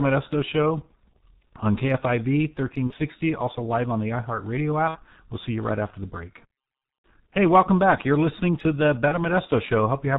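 Throughout the speech, the G.723.1 codec damage is heavy. Nothing reaches above 4 kHz, and the slowly updated voice model leaves the voice hoarse and dull with smeared consonants, which fits the 6.3 kbit/s mode. What separates it from ordinary telephone band-limiting is this rough, grainy texture and the blurring of fast sound changes, not just missing treble.

VoIP packet loss concealed by the speech codec breaks in four times. At 2.87 s, just before "also live on the", the voice is stretched into a buzzy tone or coloured noise that fades. At 4.88 s the gap runs longer, pointing to two lost 30 ms frames. At 7.02 s, right after "right after the break", the same thing happens. At 9.08 s, after "listening to the", the loss is shorter and fits a single frame. Each gap is filled with a stretched, fading buzzy tone or coloured noise rather than silence or a click, and the voice stays weak for a moment after it returns. 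That is how concealment differs from a plain dropout.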